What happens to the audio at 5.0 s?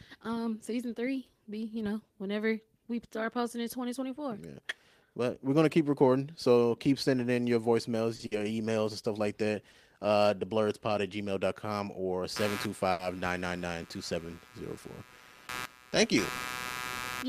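Nothing goes wrong at 5.0 s; the speech carries on intact through that moment.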